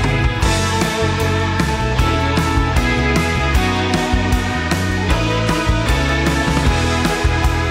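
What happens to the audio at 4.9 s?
Nothing goes wrong at 4.9 s; the audio plays through that moment intact, with no dropout, click or distortion.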